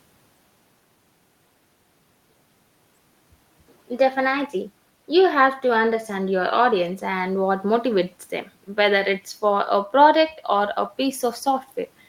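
No technical faults are audible.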